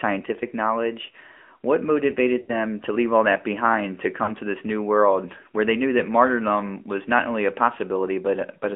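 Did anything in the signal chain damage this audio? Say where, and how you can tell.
Yes. At the codec stage, AMR narrowband mobile coding runs throughout the speech. The spectrogram shows a band of roughly 250 Hz to 3.4 kHz with nothing above 4 kHz. Coding damage is plainly audible as buzzy, synthetic timbre. That fits a rate of about 10.2 kbps, where few excitation pulses drive the vocal tract model.

At the network stage, lost AMR speech frames occur at 2.42 to 2.52 s and at 4.24 to 4.31 s. These are gaps of about 60 ms and 40 ms, which points to three and two lost frames. The decoder repeats the last pitch and filter settings at falling gain. The waveform shows a drawn-out, decaying smear, then weak, rough onset.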